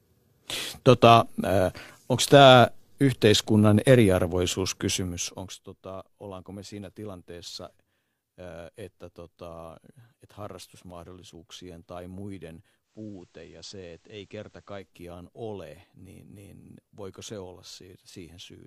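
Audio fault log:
12.82–14.94 s, digital radio blending to analogue: the receiver lost its digital stream and cross-faded over 181 ms to the station's FM broadcast and back. The speech drops about 2 dB and gains faint hiss roughly 40 dB down.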